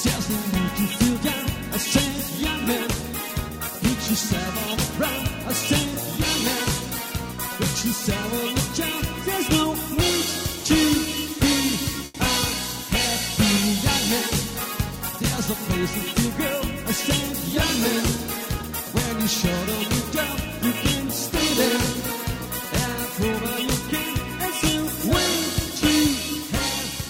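At 12.05 to 12.16 s, the sound hangs on itself for about 90 ms with a faint buzz or dip, then carries on where it left off with nothing skipped. This short stall from a late packet came from the jitter buffer running dry and the receiver stretching the last audio until the packet arrived.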